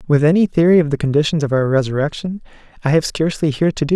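No technical faults are audible anywhere in the speech. Nothing in the signal draws attention to itself at any point.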